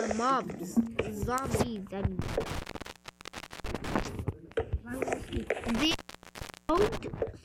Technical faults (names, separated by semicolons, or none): intermittent contact